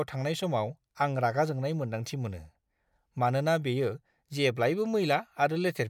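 No audible technical faults.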